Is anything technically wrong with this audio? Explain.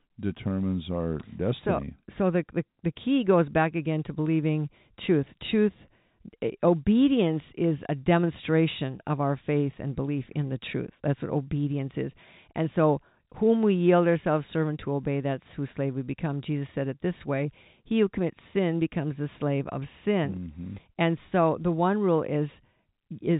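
No, nothing in this speech stood out as a technical problem on listening.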